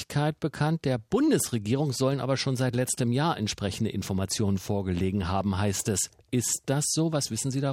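Nothing stood out as a technical problem on listening to this audio.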